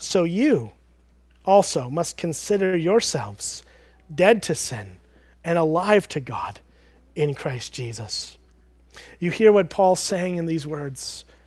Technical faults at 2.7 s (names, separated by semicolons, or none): short stall from a late packet